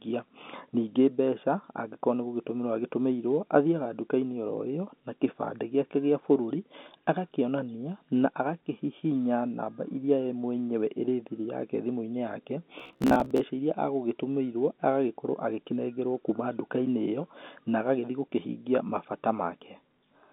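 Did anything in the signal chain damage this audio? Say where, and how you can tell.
Yes. From 12.80 to 13.44 s the speech turns into a rigid, metallic buzz near 66.7 Hz that only loosely follows the words. This is robotic sound from repeated short buffers. The buffer stage was likely starved and kept looping the last 15 ms, so roughly half of that stretch is repeats.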